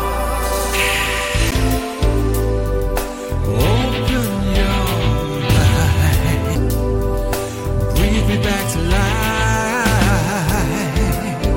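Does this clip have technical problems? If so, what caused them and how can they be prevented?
Yes. Two CD skips occur, at 1.51 s and 6.55 s. Each time the laser jumped to another turn of the disc's spiral, so the player muted for roughly 10 ms and then a few milliseconds, ticked, and resumed elsewhere. On a waveform these show as brief flat gaps with abrupt discontinuities; on a spectrogram, as thin broadband vertical lines. Prevent them by cleaning or replacing the disc, isolating the player from knocks, or ripping with error-correcting software.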